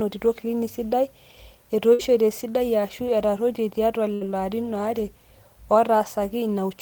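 A burst of packet loss hits twice, at 1.93 to 2.02 s and 4.15 to 4.24 s. Each time about 60 ms of speech never arrives, and the receiver stretches the last sound for roughly 55 ms, fading it into a brief buzz or hiss before the speech resumes with a piece missing.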